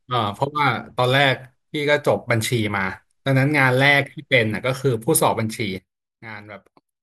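Speech clip with a sudden gain jump at 5.78 s: level and background noise drop together by about 14 dB through the end, likely an unramped gain change.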